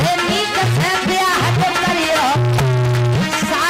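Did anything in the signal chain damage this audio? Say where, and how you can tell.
No, nothing along the chain seems to have left a mark on this one, so there's no stage to point a finger at.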